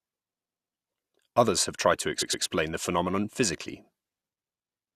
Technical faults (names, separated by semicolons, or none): repeated frames